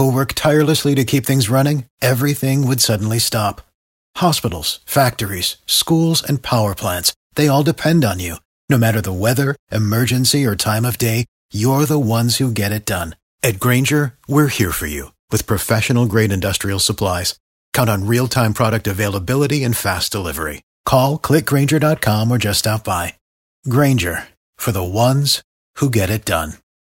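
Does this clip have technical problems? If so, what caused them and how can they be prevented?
No, this clip has no technical problems, so there is nothing to trace to a cause or prevent.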